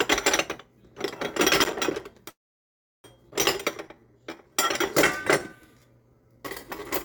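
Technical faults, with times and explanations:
1.61–2.19 s, processor overload crackle: a gritty burst of crackle rides on the sound for a bit over half a second. The gaps suggest an audio processor missing its deadlines on small buffers of around 5 ms, roughly fifteen times in this stretch. Each miss drops a sliver of silence with hard edges. Unlike a network dropout, the sound keeps moving forward underneath, so it is torn up rather than stopped, and the roughness ends when the load eases.
2.29–3.06 s, call audio freeze: the sound briefly smears on as a fading buzz or hiss, then goes silent for about 0.7 s before resuming exactly where it left off. The likely cause is delayed packets draining the jitter buffer, so the receiver stretched the last sound and then had nothing to play. Nothing is lost. About three quarters of a second of delay is inserted, which is what separates it from a skip, where audio actually disappears.
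3.30–3.33 s, skip ahead: playback jumps forward with only a tiny join of around 14 ms, and roughly half a second of sound is gone. Later audio was already queued, so the dropped stretch was simply passed over, most likely by a jitter buffer shedding excess delay. This removes about half a second of the lag built up earlier. Unlike the freeze, there is no pause to hear. The two sides of the cut butt almost directly together, so material is missing rather than delayed.
3.56 s to the end, jitter buffer slow-down: the rest of the clip plays at about 86% speed while keeping its original pitch. Sounds are drawn out. The receiver is rebuilding its reserve by repeating single pitch periods and bits of pauses, adding about 0.49 s in total. A slowed recording or tape drag would lower the pitch along with the tempo. Here only the timing stretches, which marks it as deliberate buffer padding.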